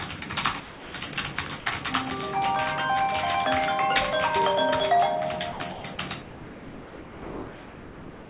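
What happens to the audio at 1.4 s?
At 1.4 s the audio is inside a stretch of choppy sound from 0.6 to 1.66 s, likely sound chopped by the voice detector. It gated transmission on and off, swapping about 440 ms of real sound for comfort noise, leaving two or more holes in the sound.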